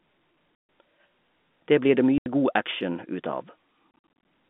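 Speech cut by abrupt holes of dead silence: about 140 ms at 0.55 s, 80 ms at 2.18 s between "blir det" and "god action ut", and a stutter of short dropouts from 3.91 s, 190 ms lost across 340 ms with no single gap longer than 50 ms. This is packet loss filled with silence. The receiver muted each missing packet, and the gap lengths fit 10 ms packets. The narrow 200 Hz to 3.5 kHz band of the G.711 telephone line can be heard throughout.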